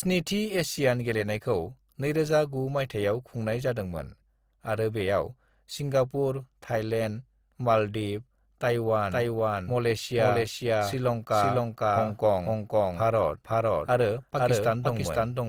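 Throughout the clip, the speech has most likely passed through Opus compression at a low bitrate. The damage is plainly audible and fits a rate around 24 kbps in the codec's music mode. With too few bits, the encoder keeps each band's energy but fills the fine detail with folded or noisy content, so the full-band sound turns grainy and rough rather than swirly, and tonal parts lose their clean edge.

From 9.11 s to the end, a doubled audio track appears, likely because a second copy of the same audio is mixed in out of step. The copy trails by about half a second at roughly the same level. It enters abruptly, with no decay or room colour, so every sound is followed by a dry full-band repeat that crowds and smears the speech until the clip ends.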